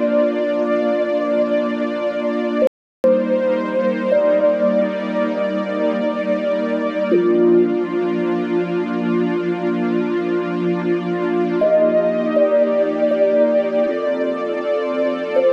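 At 2.67 s the sound cuts off abruptly and stays silent until 3.04 s, when it resumes mid-flow. That is an audio dropout to silence lasting about 370 ms, with no room tone or background left in the gap, so whatever happened in that stretch is simply missing. The likely cause is a momentary loss of the input signal, such as a brief disconnect or mute, while recording carried on writing silence.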